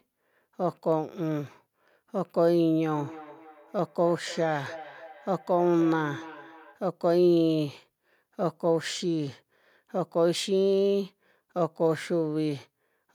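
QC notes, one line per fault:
2.95–6.84 s, feedback echo between two devices: speech returns roughly every 300 ms, about 18 dB down. A second device replays the audio into this microphone, outside its echo canceller's reach.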